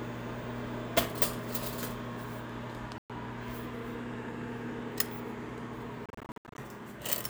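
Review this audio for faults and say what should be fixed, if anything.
The sound cuts to silence twice, and each time resumes further along as if it had kept playing. The first gap runs from 2.98 to 3.10 s, about 116 ms lost. The second is a scatter of short holes between 6.06 and 6.58 s, about 334 ms missing over 522 ms, the longest single hole 73 ms. This is likely a Bluetooth dropout: wireless packets arrived too late to play and were discarded. To prevent it, keep the headphones close to the source with a clear line of sight, and move away from competing 2.4 GHz traffic or allow a larger receive buffer.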